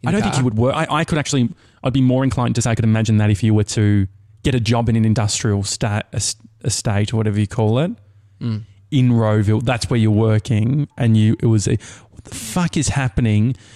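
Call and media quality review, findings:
Time-stretched section, 0.0 to 5.2 s. Speech rushed, pace about 1.59x, pitch unchanged; normal pace resumes abruptly at 5.2 s. Likely cause: software time-compression to fit a target length, dropping short segments to shorten the audio while preserving pitch.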